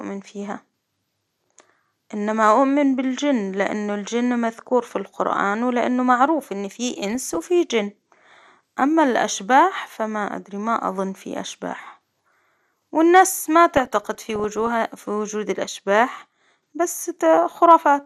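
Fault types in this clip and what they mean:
MP2 compression: The speech sounds dull and muffled throughout, with a gurgling, granular roughness that is plainly audible and high frequencies that seem to come and go. This is likely MPEG Layer II coding at a low rate, which fits something around 80 kbps. The codec divides the sound into 32 sub-bands and shares out bits among them. With this little to spend, upper bands get switched off and the remaining ones are quantised coarsely.
DAB burbling: Two bursts of burbling sit over the speech, from 7.03 to 7.47 s and a longer one from 13.74 to 14.71 s. They bring short blips of noise in individual frequency bands. This happens when a weak digital radio signal lets a small share of bit errors slip past error correction into the MP2 data. Corrupted samples and scale factors then make single sub-bands misbehave frame by frame.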